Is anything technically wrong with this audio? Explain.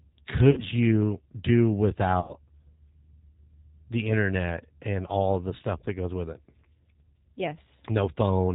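Yes. The whole clip of speech has been through the G.729 codec at 8 kbit/s, and it is plainly audible. The codec rebuilds each 10 ms frame from a vocal tract filter, a pitch predictor and a few pulses, so the voice sounds rough and slightly synthetic, with nothing above 4 kHz. A simple telephone band-limit would sound dull but smooth. This roughness comes from the model-based resynthesis itself.

There is also VoIP packet loss concealed by the speech codec, at 0.51 to 0.63 s and at 2.20 to 2.34 s, covering about 60 ms and 90 ms of lost audio. That fits two and three 30 ms packets. The decoder carries its last pitch and filter forward at falling gain, so each gap becomes a stretched, buzzy tone or coloured noise that fades. Recovery is not clean, because each new frame builds on the corrupted state. A plain dropout would instead give a hard silence or click.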